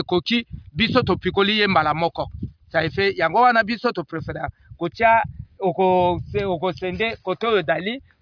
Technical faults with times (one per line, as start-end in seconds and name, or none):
none